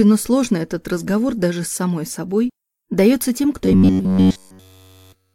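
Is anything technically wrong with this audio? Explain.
Yes. From about 3.66 s to the end at 5.35 s, you get robotic sound from repeated short buffers, likely because fresh audio arrived too seldom. Essentially every chunk is a replay, fitting roughly 10.7 ms buffers, so the sound collapses into a rigid metallic buzz near 94 Hz.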